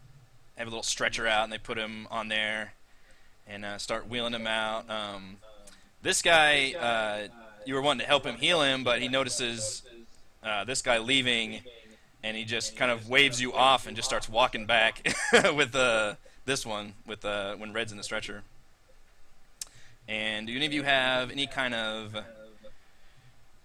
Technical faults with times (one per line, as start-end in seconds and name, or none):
none